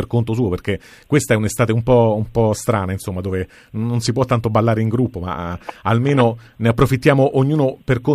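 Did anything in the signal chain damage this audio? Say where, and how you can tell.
No, nothing in the signal chain damaged this audio.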